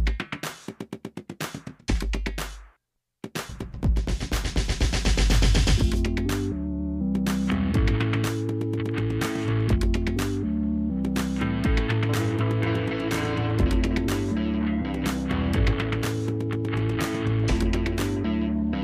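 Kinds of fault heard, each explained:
No technical faults are heard in this audio.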